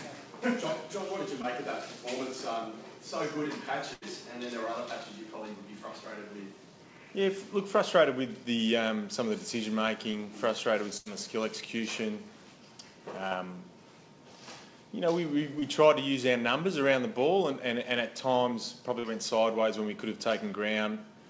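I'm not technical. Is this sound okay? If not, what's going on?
No. There are two kinds of fault. Short concealed packet loss occurs at 1.42, 10.12, 13.28, 15.59 and 19.0 seconds. At each of these points, a slice of audio lasting 20 to 40 ms never arrived in time, so the receiver continued the previous sound to cover the gap. You hear a brief smear or wobble.

Two bursts of packet loss, from 3.93 to 4.04 seconds and from 10.97 to 11.08 seconds, each lose about 80 ms in a row. The receiver stretches the last sound into a fading buzz or hiss, then jumps ahead, so that stretch of audio is missing. The call's G.722 codec also leaves nothing above 8 kHz.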